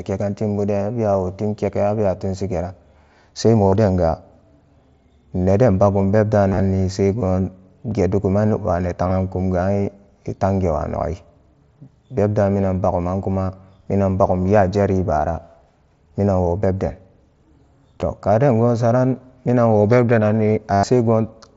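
Voice packets from the Bluetooth headset were lost, and the receiver concealed each gap by repeating the most recent stretch of waveform. This is concealed Bluetooth headset packet loss. The brief losses at 1.13, 7.91 and 18.01 s, and the scattered single-frame losses at 9.05–9.11 s, are nearly hidden. At 3.68–3.73 s, 6.49–6.60 s (scattered, just after "neden bagum") and 20.73–20.84 s (after "minanwo bebde"), the speech turns into a brief buzzy held tone, with a slight warble as real audio returns.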